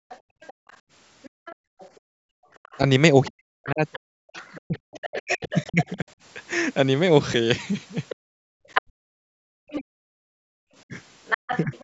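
From the start to 2.53 s, the background is gated by the echo canceller. The room sound drops away, by about 38 dB at its deepest, for around a second and a half in total. The canceller clamped the microphone while its loudspeaker played.

From 0.09 s to 5.94 s, the other side's voice leaks through, roughly 15 dB below the main speech. Echo cancellation likely left part of the loudspeaker signal in the microphone.

Between 3.29 s and 6.07 s, the speech is suppressed in double talk. It dips by roughly 40 dB, in pieces adding up to about a second and a half. Both sides were likely talking at once, so the canceller turned everything down.

At 6.53 s and 7.34 s there are small jumps in the speech. Each is a dropped buffer from an overrun, likely losing around 40 ms.

From 8.10 s to 11.82 s, the other side's voice leaks through again, much stronger now, only about 5 dB under the speech.

From 8.16 s to 10.61 s, the background is gated again. 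It drops by about 40 dB at most, for roughly half a second overall.

From 8.81 s to 11.83 s, double-talk suppression returns. The speech is cut in pieces, by around 40 dB, for about a second.

At 9.77 s, a larger dropped buffer skips about a tenth of a second, with a jump in the sound. In the call microphone processing, the lowest bass is filtered out, which is normal.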